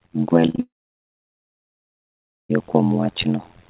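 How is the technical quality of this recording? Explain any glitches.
The recording has serious technical faults: a constant buzz and a stretch of lost audio near the start.

Overlap-add ripple runs throughout. Frames were rejoined with an overlap that doesn't sum evenly, so level swings about 60 dB around 100 times a second, giving a metallic buzz with extra tones around each note.

Short concealed packet loss occurs three times back to back, at 0.46 to 0.50 s, 0.50 to 0.56 s and 0.56 to 0.60 s. The receiver patched each missing piece from the preceding sound, heard as a brief smear or wobble.

A long network dropout follows, from 0.60 to 2.51 s. The sound stops for roughly 1.8 s of silence, likely because no packets arrived, and resumes later with that section missing.

The call path's band limit is audible, with nothing above 4 kHz, which fits a 64 kbps G.711 mu-law codec.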